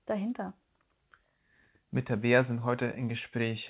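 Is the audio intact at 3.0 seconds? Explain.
Yes, the speech at 3.0 seconds is intact, with no dropout, glitch or other fault at that moment.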